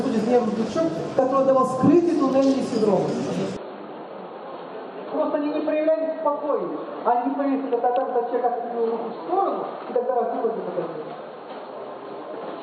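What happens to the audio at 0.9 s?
Nothing goes wrong at 0.9 s; the audio plays through that moment intact, with no dropout, click or other fault.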